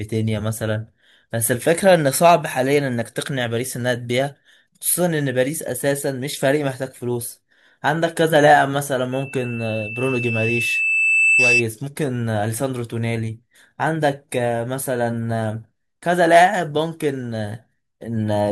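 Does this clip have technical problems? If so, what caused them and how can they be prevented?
Yes: loudspeaker feedback squeal from 9.12 to 11.66 s, a 2.6 kHz tone swelling over about two seconds above the speech. Unlike a steady interference whistle, it grows as the mic-speaker loop recirculates. Prevent it by lowering monitor gain, moving the microphone away from speakers, or notching 2.6 kHz.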